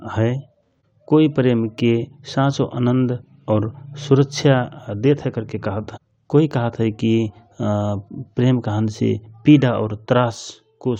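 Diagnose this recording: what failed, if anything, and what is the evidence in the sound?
Nothing failed: no stage of the chain, from capture through to playback, leaves an audible event anywhere in the speech recording.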